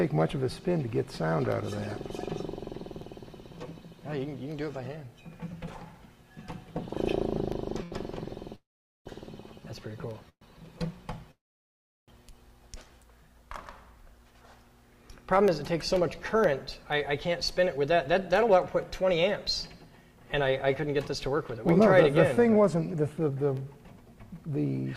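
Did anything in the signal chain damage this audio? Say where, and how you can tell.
Yes. Periodic USB or driver dropouts start at 0.52 s and run to the end. A short loss recurs every 0.5 s, filled with silence, heard as regular ticks while sound is present. This fixed interval points to a background task blocking the USB bus or audio driver.

A short stall from a late packet sits at 7.83 to 7.94 s. The last sound is held for 81 ms, then resumes from the same point. Nothing is skipped. A packet missed its slot at the network stage and the jitter buffer ran empty.

Three call audio freezes follow, at 8.56 to 9.08 s, 10.29 to 10.43 s and 11.31 to 12.10 s. Each holds the last sound briefly, then goes silent for 440, 80 and 720 ms. Playback resumes where it stopped. The likely cause is delayed network packets draining the jitter buffer.

Jitter buffer speed-up runs from 15.33 to 19.28 s at 105% and from 19.90 to 24.87 s at 106%. 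Pitch stays the same. The pace sounds hurried. The receiver trimmed small pitch-period pieces, roughly 0.2 s and 0.3 s in total, to cut built-up delay.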